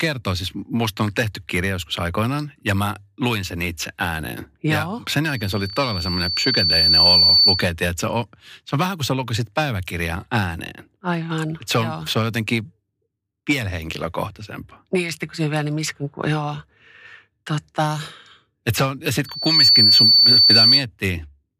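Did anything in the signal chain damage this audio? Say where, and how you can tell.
Yes. In the analogue path, the microphone picks up its own loudspeaker, and loop gain exceeds one at 4.5 kHz. That produces loudspeaker feedback squeal from 5.24 to 7.73 s, swelling over roughly two seconds, and from 19.25 to 20.86 s, building much faster, each about 10 dB above the speech.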